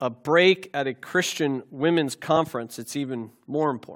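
At 2.36 s the speech gives a quick smeared blip and jumps slightly ahead, dropping about a single frame's worth, around 20 ms. This is compressed frames skipped: one 21.3 ms frame never played, and overlap between neighbouring frames softens the join rather than clicking.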